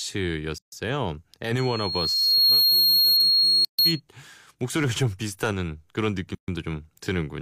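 At 0.58 s the speech drops out for about 140 ms, a gap at a join of encoded pieces: separately encoded chunks were butted together with their start delay and end padding left in. At 1.58 s a loudspeaker feedback squeal starts, a 4.3 kHz tone that swells over roughly a second to about 10 dB above the voice and howls until 4.0 s. The same joins give gaps at 3.65 s and 6.35 s, each about 130 to 140 ms.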